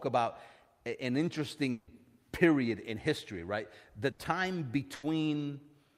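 A long network dropout runs from 1.71 to 1.90 s, between "about an" and "period in history right". About 160 ms of speech is replaced by a concealment that continues the last sound and fades without reaching silence. The likely cause is a stream interruption, and the lost stretch is skipped on resumption.

Bursts of packet loss follow at 4.11 to 4.22 s and 4.95 to 5.06 s. Each drops about 80 ms, which the receiver bridges by extending and attenuating the last sound into a brief fading fill before resuming past the gap.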